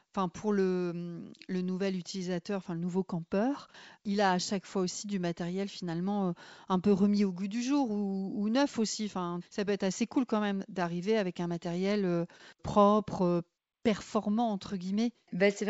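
Nothing in the recording stood out as a technical problem on listening.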